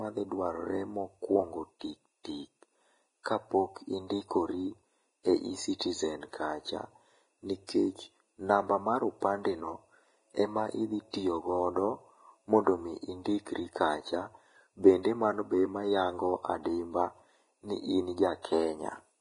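Throughout the speech, nothing survives above 10.6 kHz and the treble is grainy hiss: likely heavy Vorbis compression, coarse quantising fitting a bitrate near 28 kbps.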